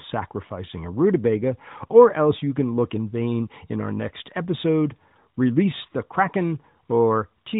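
Nothing's actually wrong with this speech clip; it's just coming through the AMR narrowband mobile codec, so it has that band-limited phone-call sound, and there's no fault to point to.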